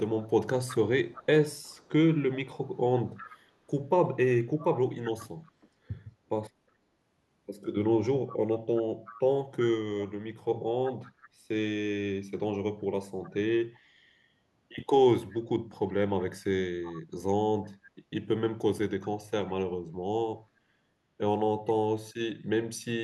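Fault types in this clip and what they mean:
echo leak: a faint copy of the speech returns 369 ms late, in longer stretches and brief scraps, likely loudspeaker sound that a far-end echo canceller failed to remove.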